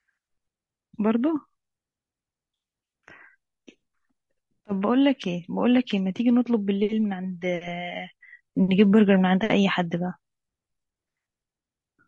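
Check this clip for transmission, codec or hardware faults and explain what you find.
There's one codec problem running through the whole speech clip. The low-delay AAC compression likely comes from short AAC-ELD frames that smear pitch harmonics, so the voice sounds rough and grainy, fitting roughly 32 kbps.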